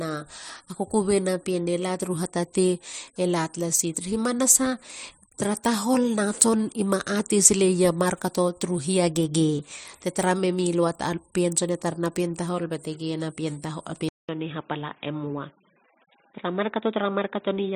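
Speech, with the input likely switched to a poorer device at 14.09 s: after a 200 ms silence, the sound turns dull and boxy, with nothing above 3.8 kHz through the end. The level stays roughly the same, but a faint new background noise appears.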